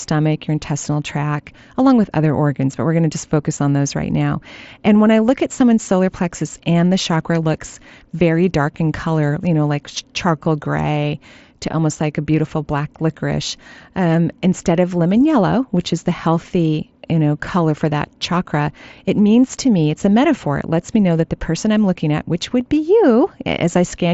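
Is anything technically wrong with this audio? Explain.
No, nothing is technically wrong with this audio.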